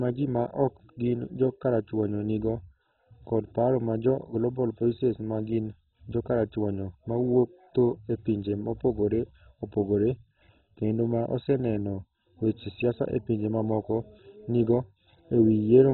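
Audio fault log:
throughout, MP2 compression: the speech sounds dull and muffled, with nothing above 4 kHz, and a heavy gurgling, granular grit clings to every syllable as upper bands seem to flicker in and out. This is likely MPEG Layer II coding at a very starved rate, which fits roughly 16 kbps. The encoder divides the spectrum into sub-bands and, lacking bits, shuts off the higher ones entirely while quantising the survivors so coarsely that the remaining sound turns rough and bubbly.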